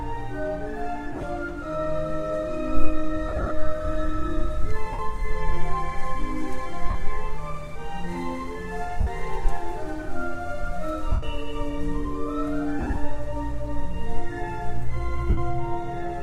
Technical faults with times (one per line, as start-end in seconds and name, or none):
1.12-1.23 lost LE Audio frames
3.28-3.51 lost LE Audio frames
4.93-4.99 lost LE Audio frames
6.90-6.95 lost LE Audio frames
9.01-9.07 lost LE Audio frames
11.12-11.23 lost LE Audio frames
12.79-12.97 lost LE Audio frames
15.30-15.38 lost LE Audio frames